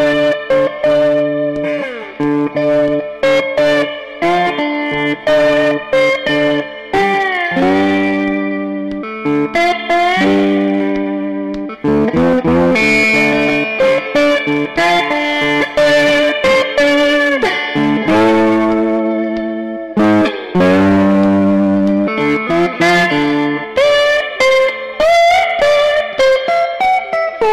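Hard clipping runs through the whole clip. The signal is driven about 2 dB past what the stage can pass, so roughly one sample in seven is cut flat at the ceiling. Those squared-off peaks add high harmonics, heard as a gritty crackle on louder passages.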